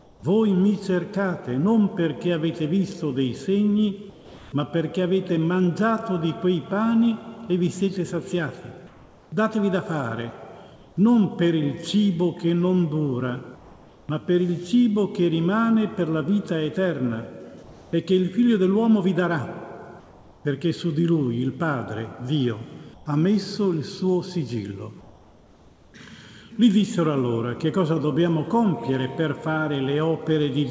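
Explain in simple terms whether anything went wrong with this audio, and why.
Yes. Comfort noise in place of the background appears at 0.0–0.23, 4.10–4.52, 8.87–10.97, 13.55–14.09, 17.63–17.93, 20.00–20.45 and 22.94–25.94 s. In those pauses the real background gives way to a flat, featureless hiss, usually slightly quieter, likely because the sender stopped transmitting and the receiver filled the gaps.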